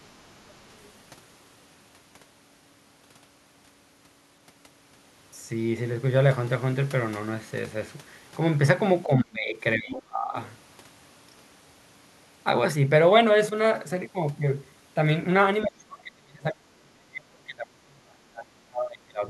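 From 0.84 to 0.90 s the echo canceller likely failed to remove all of the loudspeaker signal from the microphone. The other side's voice leaking through appears as a faint scrap, roughly 35 dB below the talker.

From 9.07 to 10.36 s both sides speak at once, and the canceller likely cannot separate the talker from the echo, so it turns both down. This speech suppressed in double talk makes the voice dip by as much as 30 dB, across about a second in total.

At 15.63 to 15.67 s the canceller again likely lets loudspeaker sound through. This time the leaking voice is a brief but much stronger fragment, only about 15 dB under the talker.

From 15.63 s to the end of the clip, double talk likely pushes the canceller into suppressing everything again. The talker's voice drops by up to about 35 dB, for roughly four seconds in total.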